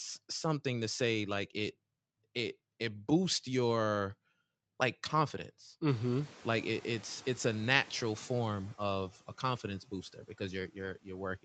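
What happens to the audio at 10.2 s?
Between 9.86 and 10.41 s the noise suppressor cuts into the speech, mistaking quiet speech energy for background and turning it down by up to 12 dB for roughly 150 ms in total. Unlike a packet-loss gap, the sound is never fully silenced; those parts just sound faint and swallowed.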